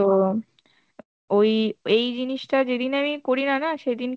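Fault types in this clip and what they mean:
Call audio freeze: from 1.02 to 1.30 s the speech halts, the last sound trails off briefly and most of that stretch falls silent. It then resumes exactly where it stopped, likely because delayed packets left the jitter buffer empty. Unlike a packet-loss dropout, nothing is missing: a gap of about 265 ms has been inserted, so everything after it arrives that much later. This is separate from the call path's normal band limit at 8 kHz.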